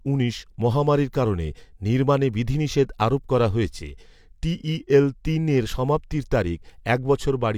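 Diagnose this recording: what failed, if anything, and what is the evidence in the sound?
Nothing in the chain failed: the speech signal runs continuously, with no break, distortion or disturbance anywhere along its path from capture to playback.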